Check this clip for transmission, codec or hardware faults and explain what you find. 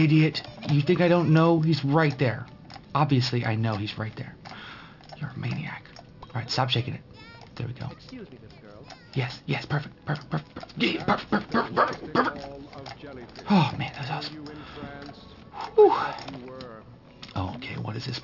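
One fault is present: aliasing, throughout the clip. The audio sounds resampled to a low rate without an anti-alias filter, which fits a 12 kHz rate. Content above 6 kHz folds back to wrong pitches, roughly 20 dB below the signal, giving gritty, metallic highs crowding the band edge.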